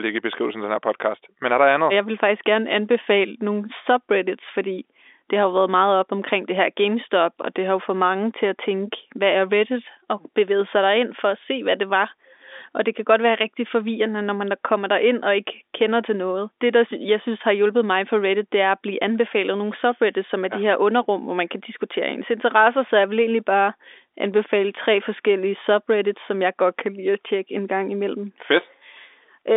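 The speech comes through an intact G.711 telephone link, carrying the normal line band of about 300 Hz to 3.6 kHz with nothing above 3.8 kHz, and no fault is audible anywhere in the recording.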